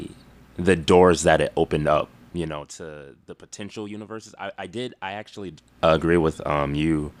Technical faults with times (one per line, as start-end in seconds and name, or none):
none